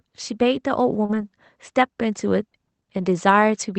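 At 1.05 s a short concealed packet loss hits the speech. About 40 ms of audio never arrived in time. The decoder carried the last sound forward for roughly 34 ms, then blended back. It comes across as a brief smear.

A lost packet rebuilt from error correction overlaps this, running from 1.09 to 1.23 s. About 80 ms was replaced by low-bitrate copies, which fits four 20 ms packets. There is no gap, but the sound turns rougher and noisier.

The same fault recurs from 2.97 to 3.03 s. About 40 ms was rebuilt, which fits two packets. That stretch again sounds grainy and noisy. The Opus call path keeps its normal band limit near 8 kHz.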